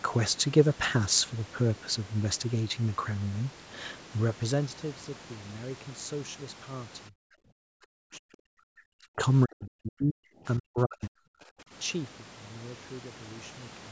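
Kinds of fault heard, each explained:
Speech suppressed in double talk: from 7.09 to 9.19 s and 9.45 to 11.32 s the speech breaks up in chunks, dipping by about 40 dB, likely an echo canceller mistaking it for loudspeaker echo. Unlike a gradual fader move, these cuts are patchy.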